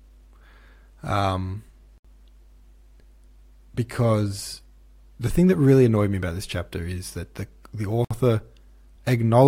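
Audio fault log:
1.98–2.05 s and 8.05–8.11 s: gap at a join of encoded pieces. Gaps of 66.6 ms and 60.4 ms, six seconds apart, break the speech, the second just after "is that the the". Untrimmed encoder start delay and final-frame padding remain at each join, leaving smeared dropouts.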